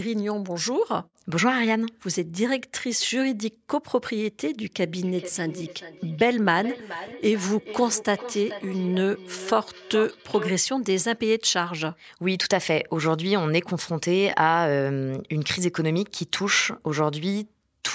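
From 5.03 to 10.6 s, feedback echo between two devices: a second device replays the microphone's audio, so speech repeats roughly every 0.4 s, about 12 dB down.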